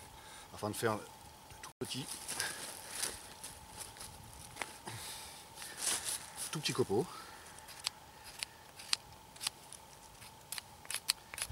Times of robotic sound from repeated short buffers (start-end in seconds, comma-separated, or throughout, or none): none